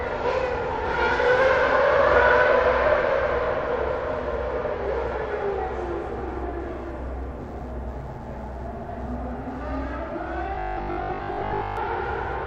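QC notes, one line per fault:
10.55–11.77 s, robotic sound from repeated short buffers: new audio likely arrived too seldom, so a segment of about 20 ms was looped across most of this stretch, skipping real content and stamping a rigid, metallic 50 Hz buzz onto the sound.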